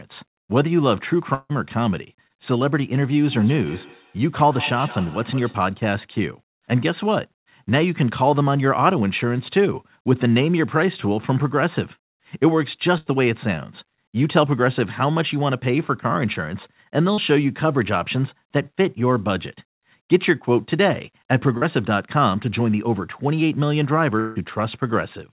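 At 1.34 s the sound stops being real for about 0.17 s, until 1.51 s. The last sound carries on as a fading buzz or hiss for about 150 ms, then about 30 ms of silence follows. Speech resumes further on, with about 160 ms gone. This is a long network dropout, likely. The receiver had nothing to play and stretched the final sound. Once that ran out, only silence remained.

At 2.27 s there is a short concealed packet loss of about 20 ms. A brief smear replaces the lost piece. The decoder continued the previous sound and blended back into the real audio by 2.32 s. Two more follow, each about 40 ms: from 17.14 to 17.19 s, and from 21.57 to 21.63 s. Each is a quick smear or wobble. A short consonant can disappear inside one.

From 3.28 s to 5.71 s there is feedback echo between two devices. Every sound comes round again, at a steady interval of around 150 ms. The repeats are thinner and more ringing than the original. 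At their loudest they sit about 17 dB below the speech. Two devices in the same room share the call. One device's microphone hears the other's loudspeaker, and neither echo canceller removes the other's playback.

At 12.98 s a burst of packet loss begins, lasting to 13.08 s. About 80 ms of audio never arrived in time. The receiver held the last sound and let it fade, so it turns into a dying buzz or hiss. Speech then picks up slightly later, with the middle missing.

At 24.19 s what is likely a second long dropout runs to 24.38 s. The last sound is stretched for about 160 ms as a fading buzz or hiss, with no silent stretch after it. Then the audio jumps ahead past the missing 160 ms.

Across the whole clip nothing is heard above 4 kHz. That fits a narrowband call codec such as G.711.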